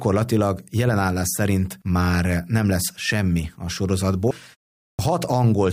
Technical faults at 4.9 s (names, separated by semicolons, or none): clipped start after a pause